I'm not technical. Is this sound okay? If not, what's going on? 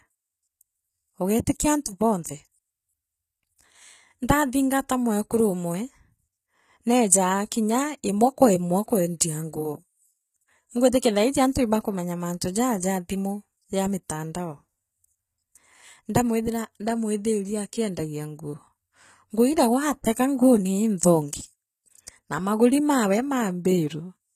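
No. The whole recording has a plainly audible compression problem. The top end is there, but it isn't the real treble. It's likely from HE-AAC compression. This method stores only the lower part of the sound and rebuilds the highs by copying lower parts upward. The copies don't line up with the real ones. So s sounds come out gritty, metallic or lispy. Nothing at all remains above 14.9 kHz.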